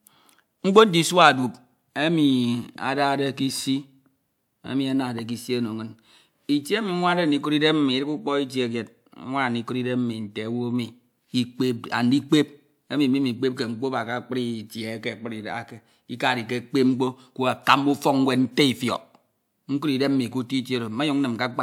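Dropped samples at 14.04 s: a single sharp click cuts through the speech at this point, showing up as a thin vertical line spanning the whole spectrum. The likely cause is a tiny run of samples, a fraction of a millisecond's worth, going missing from the stream, so the waveform leaps straight from one value to a later one. The gap is far too brief to remove any audible sound, leaving only the abrupt step as a click.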